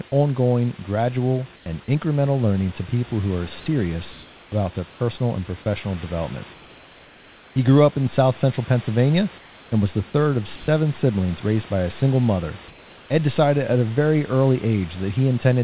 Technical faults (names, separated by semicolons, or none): comfort noise in place of the background; sound dropped by the voice detector